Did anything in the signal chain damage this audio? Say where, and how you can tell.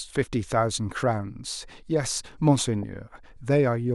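Yes: DAB burbling, 2.63 to 2.83 s, in the broadcast codec stage. Burbling over the speech across 13 frames suggests weak-reception bit errors corrupting MP2 sub-band scale factors frame by frame.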